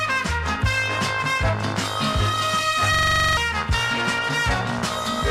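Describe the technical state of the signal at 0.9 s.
The signal is intact at 0.9 s, with no audible fault at that point.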